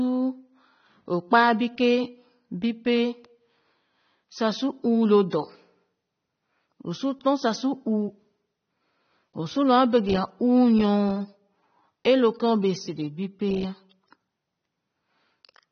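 From start to finish the speech sounds dull and smeared, with nothing above about 6.3 kHz, a watery warble on held sounds and fizzy sibilants. This is likely AAC compression at a low bitrate, consistent with around 24 kbps, lowering the cut-off and leaving spectral holes.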